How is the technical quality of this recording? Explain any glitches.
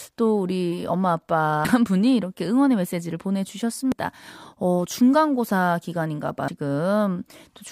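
The speech recording is marred by three brief glitches. Damaged data in a compressed stream at 1.65, 3.92 and 6.48 s: corrupted bytes make the decoder misread frames and lose sync, producing short blips.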